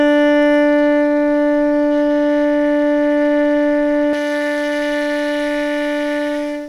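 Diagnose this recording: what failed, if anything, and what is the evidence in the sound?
Pre-emphasis left on, at the recording or transmission stage, from 4.13 s to the end: the music turns thin and bright as a J.17-type treble boost goes uncorrected by de-emphasis. 10 kHz sits about 11 dB hot relative to 1 kHz. A spectrogram's upper bands brighten abruptly at 4.13 s.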